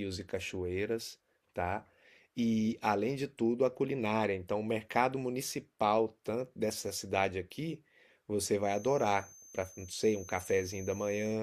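A loudspeaker-to-microphone loop likely sat right at the edge of feedback from 8.58 s to the end at 11.42 s, sustaining one tone without building. The result is a feedback whistle: a thin, steady 6.2 kHz tone roughly 20 dB below the speech, swelling and fading slowly in level.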